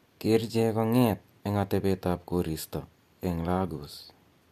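No dropouts, clicks, distortion or other technical faults are audible anywhere in this speech recording.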